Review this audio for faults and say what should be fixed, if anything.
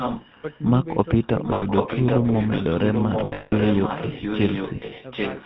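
The call was carried over the GSM full-rate codec for its whole length, at what sounds like 13 kbit/s. The codec rebuilds the voice from a vocal-tract model excited by sparse regular pulses and cuts everything above 4 kHz. The speech therefore has a plainly audible buzzy, gravelly roughness and a dull, band-limited top end throughout. To prevent this, route the call over a wideband codec such as AMR-WB or EVS instead of full-rate GSM.

The far end was likely playing the call on a loudspeaker, and its echo canceller let part of the microphone pickup through. The result is an echo leak: a copy of the speech arriving about 790 ms late. From 0.0 to 0.65 s it is nearly as loud as the direct speech and clearly audible. Around 1.22 to 1.27 s a second, very faint scrap appears. To prevent this, use a headset at the far end or tune its echo canceller so it converges and suppresses the residual.

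Lost GSM frames were patched by repeating the last good frame at falling level. At 1.54 to 1.64 s, 80 ms of sound is replaced by a short metallic ring. From 3.2 to 3.53 s, losses are scattered over about a third of a second, and the longest gap is around 200 ms. That gap holds as a rough ring. From 4.76 to 4.93 s, several brief dropouts make the sound rough and metallic. To prevent this, improve radio coverage or add error protection so fewer frames arrive corrupted.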